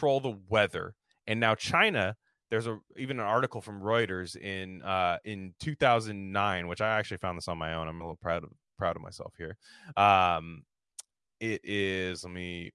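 A speech recording with nothing technically wrong to report.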